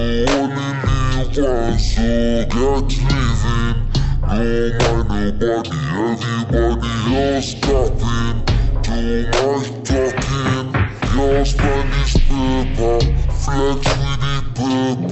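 From start to finish the sound crawls at half speed and sits a full octave low, with a faint mirrored copy haunting the upper half of the spectrum. This is stereo read as mono: alternating left and right samples were played back consecutively as one channel.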